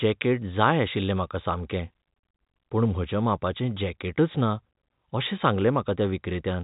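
No technical faults turn up anywhere in the recording. The speech comes over a G.711 telephone path, so nothing above 4 kHz gets through, and any quantisation noise riding under the signal is faint at most.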